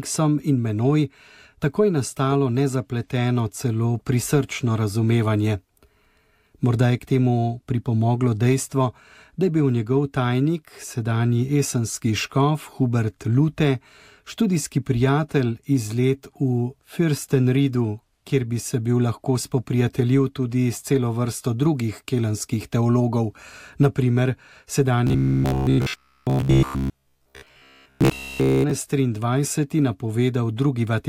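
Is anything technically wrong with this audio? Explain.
Yes. From 25.07 to 28.71 s the audio takes on a robotic sound from repeated short buffers: a rigid, metallic buzz pitched at about 66.7 Hz that loosely tracks the underlying sound. The likely cause is audio arriving too slowly, so playback fills the gaps by looping the most recent segment of roughly 15 ms, one over the buzz frequency, while fresh material is skipped. Around 70% of that stretch is repeated rather than new.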